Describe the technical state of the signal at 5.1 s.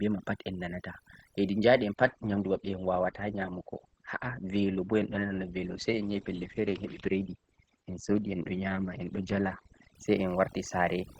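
At 5.1 s the adaptive stream is at a lower bitrate, from 1.95 to 9.95 s. The connection dipped, so the treble stops dead at 9 kHz, which fits an Opus stream at around 12 kbit/s. On top of that, overdone noise removal runs throughout. Bands near the noise floor get gated out, leaving a lowered background that breaks up into twinkly specks.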